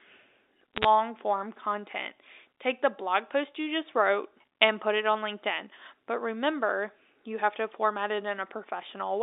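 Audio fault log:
0.74 to 0.85 s, bit errors on a digital phone line: just before "form content", a brief burst of sharp ticks and crackle sits over otherwise intact speech on the G.711 telephone band. Roughly half a percent of bits flipped, each corrupting one sample. Unlike packet loss, nothing drops out or repeats.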